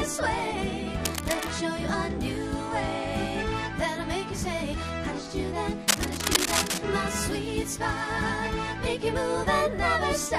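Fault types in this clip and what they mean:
Cable scratch noise: Dense, uneven scratching bursts sit over the sound from 1.05 to 1.58 s and 5.88 to 6.84 s. They are likely from a worn, moving cable contact.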